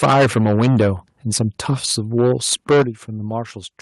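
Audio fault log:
0.02–0.9 s, 1.35–1.43 s, 1.69–1.92 s, 2.18–2.82 s: microphone overload. The loudest stretches are flat-topped and crackly, worst at the start and from 2.18 s, where peaks overshoot by about 14 dB and 12 dB and a fair share of the waveform is sheared off. The likely cause is input gain set too high for the converter.
0.04 s and 2.82 s: microphone volume stepped down. The level drops abruptly, by about 2 dB early on and by about 9 dB right as the 2.18–2.82 s distortion ends. This is likely the call software cutting the device's input volume after detecting clipping.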